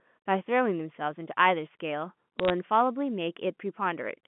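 From 2.40 to 2.50 s, bit errors on the digital phone line turn single samples into sharp ticks. Unlike packet loss, the speech never drops out.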